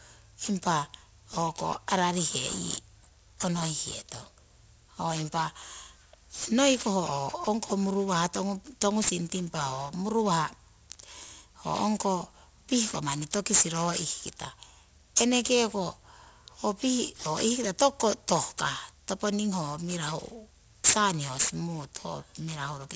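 Aliasing runs through the whole clip. It sounds like a drop to roughly 16 kHz without an anti-alias filter, so content above 8 kHz folds back down. Sibilants come out gritty and metallic, with the folded junk sitting only a little below the speech itself.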